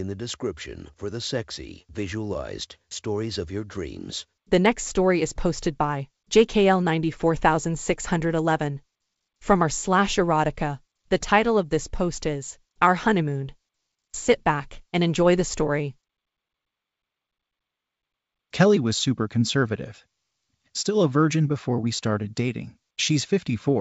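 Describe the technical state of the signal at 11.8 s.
At 11.8 s the speech is intact, with no fault at that moment, carried over a G.722 wideband telephone path at 64 kbit/s that leaves at most a faint trace of its coding.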